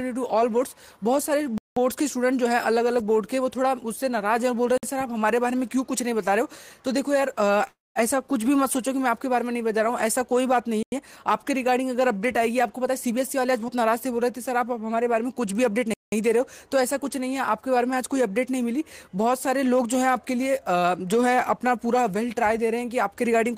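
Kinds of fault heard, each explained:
Block of digital silence: at 1.58 to 1.77 s, 4.78 to 4.83 s, 10.83 to 10.92 s and 15.94 to 16.12 s, the sound drops abruptly to silence and returns with no fade. Output buffers likely went unfilled in time. The two 0.19 s holes fit 8192-sample buffers and the 0.09 s hole a 4096-sample one. The 0.05 s gap is the briefest.
Call audio freeze: from 7.67 to 7.98 s, the last sound is stretched into a fading buzz or hiss that sinks into about 0.19 s of silence. The audio then picks up exactly where it halted, so about 0.28 s of delay is inserted and nothing is lost. This likely comes from packets being held up until the jitter buffer emptied.
Jitter buffer speed-up: between 12.75 and 13.75 s, the sound runs at 113% of normal speed while keeping its pitch, so it comes across as hurried. The receiver was shedding excess buffered delay by repeatedly cutting out short pitch-period-sized slices. 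Roughly 0.15 s is trimmed over that second, which pulls the timing back toward its target.
Short concealed packet loss: at 13.68 to 13.71 s, inside the speed-up, 40 ms of audio failed to reach the decoder in time. The receiver extended the preceding sound to bridge the hole and then crossfaded into the real signal. What is heard is a brief smear or wobble rather than a clean gap.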